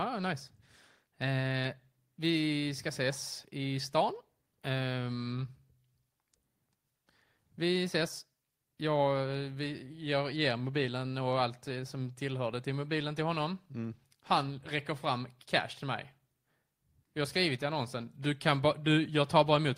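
No technical faults are audible.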